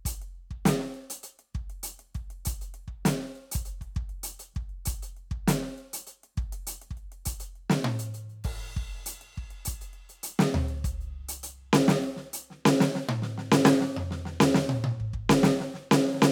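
No technical faults are audible.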